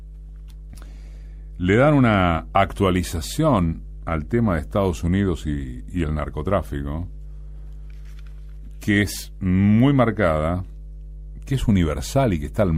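Mains hum runs from the very start to the end. It is a steady low tone at 50 Hz. Power-line current has leaked into the signal path, most plausibly through a ground loop or a transformer sitting close to the cabling. The hum never changes pitch or level. It sits roughly 15 dB below the wanted sound, so it is plainly audible. It thickens the low end throughout.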